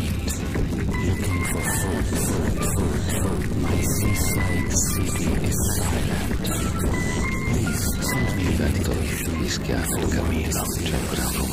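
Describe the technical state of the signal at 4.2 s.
At 4.21 to 4.24 s a sudden voltage spike, likely from a plug, switch or static discharge, is added to the signal. The result is a single loud pop, peaking roughly 10 dB above the surrounding level, with the sound continuing underneath it.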